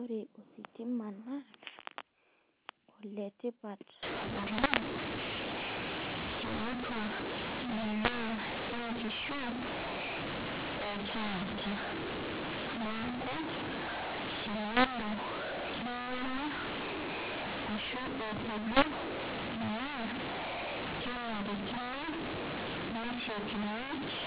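Speech over a G.711 A-law telephone path, so nothing above 4 kHz passes. From 4.03 s to the end, mu-law and A-law are mixed up. A-law bytes are decoded as mu-law. Levels scramble, the speech turns harsh and distorted, and pauses fill with noise.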